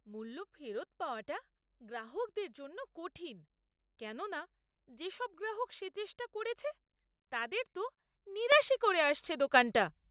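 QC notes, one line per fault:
8.52 s and 9.54 s, microphone volume stepped up: the speech and its background jump together by about 8 dB, then about 6 dB more, each in a single step. The call software raised the input volume because the microphone seemed too quiet. The telephone-band sound, with nothing above 4 kHz, carries both steps unchanged.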